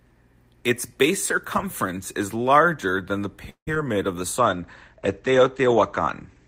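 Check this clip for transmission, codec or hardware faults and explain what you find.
Three transmission faults sit in the second half of the speech, two close together just after 3.5 s and one running to the end.

From 3.49 to 3.69 s there is a call audio freeze, likely from packets arriving late and the jitter buffer running dry. The last sound is stretched into a fading buzz, with about 90 ms of silence, for 174 ms in total. The speech then resumes exactly where it stopped, so nothing is lost and everything afterwards is simply pushed later.

From 3.75 to 3.77 s comes a short concealed packet loss. About 40 ms of audio never reached the decoder, and only a 6 ms patch of continued sound covers the hole before it blends back. Unlike the freeze, content is actually missing, so the speech briefly skips ahead with a small smear.

From 4.39 s to the end there is a call bitrate drop, from 32 to 13 kbps, after the bandwidth estimate fell. 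The encoder codes more coarsely and the audio bandwidth narrows from 20 kHz to 8 kHz. The speech turns muffled but also rough and watery, which a plain low-pass filter would not produce.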